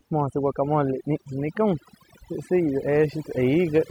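Overdone noise removal runs through the whole clip: a noise reduction stage set far too hard pushes individual frequency bands down whenever they sit near its noise estimate, taking quiet parts of the speech with them. The background drops and breaks up into twinkling specks.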